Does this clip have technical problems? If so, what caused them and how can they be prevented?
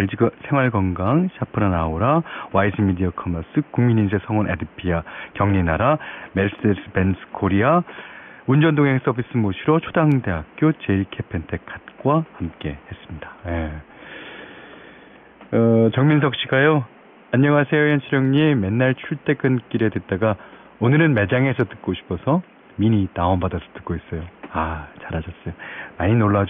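No, there are no technical problems to fix in this speech clip. The only thing underneath it is the room's own background noise, sitting about 28 dB below the speech and belonging to the recording itself.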